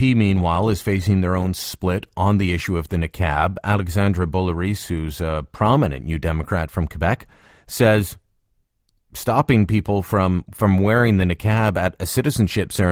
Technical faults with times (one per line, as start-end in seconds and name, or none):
none